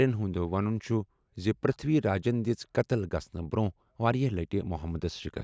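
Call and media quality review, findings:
No audible faults found.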